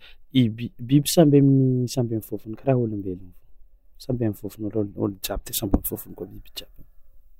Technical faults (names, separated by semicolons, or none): pre-emphasis left on